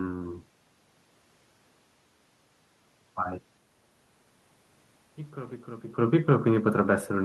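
No system faults are audible; the room noise belongs to the recording, and the level shifts around 3.5 s and 6 s are the talker moving relative to the microphone.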